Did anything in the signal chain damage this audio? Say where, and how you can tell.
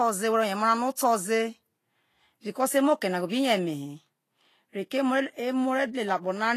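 Yes, at the codec stage, throughout the speech. The treble sounds hissy and grainy, with roughened tones and smeared consonant attacks, and nothing survives above 14.2 kHz. This fits Vorbis compression at a low bitrate, likely around 33 kbps. The encoder keeps a smooth spectral floor but quantises the high-band residue so coarsely that fine detail turns into noise of similar energy. A spectrogram would show a hard ceiling at 14.2 kHz, with blotchy, speckled texture just beneath it.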